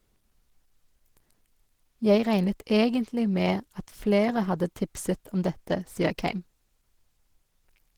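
Opus compression runs through the whole speech clip. Plainly audible muffled, hoarse and grainy coding damage points to the encoder's hybrid speech mode, likely at a low rate that fits 16 kbps. Upper bands are coarsely filled, although content still reaches 20.2 kHz.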